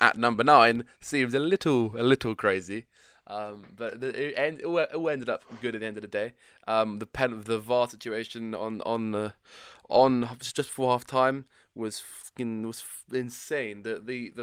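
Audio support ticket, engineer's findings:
Engineer's findings: no fault found in the audio.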